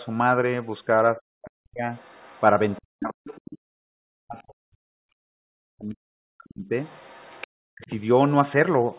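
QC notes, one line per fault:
1.16–1.91 s, speech suppressed in double talk: the talker's level collapses by about 40 dB, likely because the echo canceller treated overlapping speech as echo. The waveform shows a sudden trough and the spectrogram goes nearly blank.
1.95–2.79 s, other side's voice leaking through: a faint second voice about 30 dB below the talker, likely residual loudspeaker echo. It appears as harmonic traces under 4 kHz.
2.79–3.21 s, speech suppressed in double talk: the same deep ducking of about 40 dB, likely from double-talk suppression. The waveform envelope flattens and the spectrogram energy vanishes.
3.24–3.54 s, other side's voice leaking through: a louder leak, about 20 dB under the talker, likely uncancelled echo. It shows as a separate formant pattern.
3.53–6.74 s, speech suppressed in double talk: the longest dropout, about 3 s with dips near 40 dB, likely sustained double-talk suppression. 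The waveform shows deep dips and the spectrogram a gap.
6.85–7.47 s, other side's voice leaking through: a quiet intruding voice about 30 dB down, likely leaking echo. It appears as faint harmonics in the narrowband spectrogram.
7.56–7.91 s, speech suppressed in double talk: a brief cut of about 40 dB, likely from the echo canceller muting during overlap. It shows as a short notch in the waveform.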